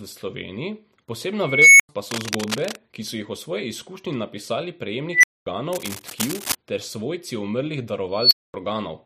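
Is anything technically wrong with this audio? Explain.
Yes. This speech clip has two kinds of fault, each occurring more than once.

An unstable filter strikes three times. At 1.40 to 1.89 s a tone of around 2 kHz swells over about 0.40 s until it clips, then drops into roughly 93 ms of silence. After "o svoji izkušnji napisali", at 5.10 to 5.46 s, a similar tone near 2 kHz builds much faster, in about 0.14 s, and is followed by about 0.23 s of silence. After "ter svojci umrlih", at 8.04 to 8.54 s, a higher squeal near 4 kHz climbs over about 0.27 s and is again followed by about 0.23 s of silence. Each time, a recursive filter is running with coefficients that feed its own output back with more than unity gain, so the tone grows until it saturates and overflows, and the output stays silent until the filter resets.

Cable scratch noise covers two stretches: 2.02 to 2.77 s, sitting about 5 dB below the speech, and 5.73 to 6.55 s, just before "ter svojci umrlih", at about the same level as the speech. 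Both are heard as dense, irregular scratching and rustling on top of the voice. The likely cause is a worn cable, connector or control being moved, making its contact resistance jump about rapidly.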